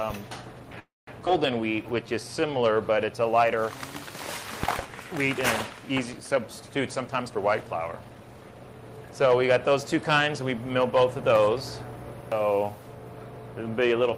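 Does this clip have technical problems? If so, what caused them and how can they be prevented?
Yes, there are four separate glitches, all clustered around how the receiver handled late or bunched-up packets.

The first is a call audio freeze from 0.79 to 1.10 s. The last bit of sound gets stretched out and fades, then about 190 ms of the 280 ms stall is plain silence before the audio picks up right where it left off. Nothing is lost, but about 280 ms of extra delay gets pushed in. The likely cause is packets stuck in transit long enough for the jitter buffer to run dry, so the receiver had nothing to play and just extended what it had. To prevent it, give the buffer a bit more headroom or fix whatever on the network path is holding packets back.

Right after that there's a skip ahead at 1.25–1.29 s. Playback jumps forward and roughly a tenth of a second of audio simply vanishes, with only a few milliseconds of patching over the seam. 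That's the buffer, or the network, throwing away a chunk while newer audio was already queued, probably to claw back the delay the freeze had just added. To prevent it, have the buffer shed excess delay gradually instead of dropping whole chunks.

Then comes a jitter buffer slow-down from 1.61 to 2.58 s. The audio runs at about 90% speed with the pitch unchanged, so things sound drawn out and a little stretched. The receiver was repeating tiny slices, single pitch periods or bits of pause, over and over to pad its reserve, adding about 104 ms in total. To prevent it, keep the buffer's target delay stable so it isn't scrambling to refill right after a skip.

Finally there's a jitter buffer speed-up from 7.01 to 8.98 s. Playback runs at about 114% speed, again at the same pitch, so it sounds noticeably rushed. The buffer had more queued than it wanted, as happens when delayed packets arrive in a burst, so it kept snipping out short pitch-period-sized pieces, around 300 ms worth overall. 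To prevent it, smooth out the bursty delivery on the network side so the buffer doesn't overfill and have to race to catch up.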